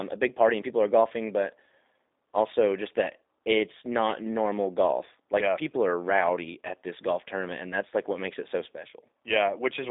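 From start to end, the speech carries plainly audible G.729 codec damage: rebuilt from a vocal tract model and sparse pulses, it sounds rough and synthetic. That texture, unlike simple telephone band-limiting to 300 Hz to 3.7 kHz, fits an 8 kbit/s G.729A link, with nothing above 3.8 kHz.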